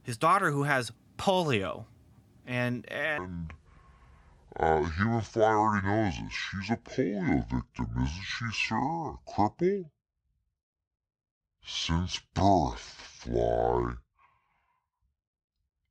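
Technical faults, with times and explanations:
3.18 s to the end, section at the wrong speed: right after "who has polio and", the speech abruptly slows to 0.59 times its recorded rate. Speed and pitch fall together, so the voice drops by roughly ten semitones and turns deep and dragging. Syllables stretch out and the sound loses its natural brightness. It stays this way to the end of the clip. The likely cause is an editor or player running this stretch against the wrong clock.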